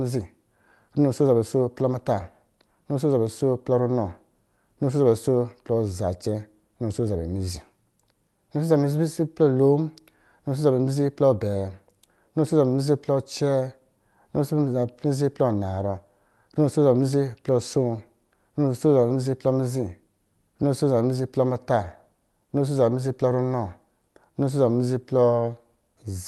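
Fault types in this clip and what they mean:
Nothing in this speech recording stood out as a fault on listening.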